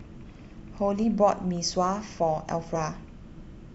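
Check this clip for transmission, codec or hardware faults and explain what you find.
Two audible skips in the speech point to compressed frames skipped. At 1.03 s the sound lurches forward, losing roughly 70 ms. At 2.75 to 2.78 s a larger jump drops around 200 ms. Whole compressed frames were missing or rejected by the decoder as damaged, so playback leapt ahead by whole frames, about three and then about ten, consistent with 20 ms frames.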